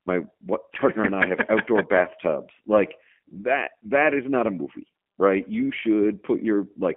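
G.729 codec damage runs through the whole speech clip. The speech is rebuilt from a vocal tract filter, a pitch estimate and a few pulses per frame, which fits an 8 kbit/s codec. It sounds plainly rough and synthetic, confined to 200 Hz to 3.4 kHz.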